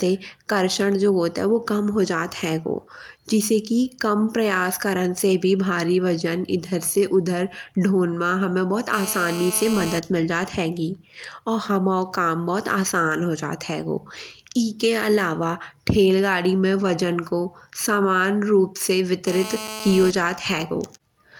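GSM phone buzz occurs at 8.93–9.99 s, after "ढोन मा हमे बहुत", and at 19.27–20.11 s. A nearby handset's 217 Hz call bursts, rectified by the audio circuit, produce a steady, raspy, harmonic-rich buzz about 11 dB below the speech.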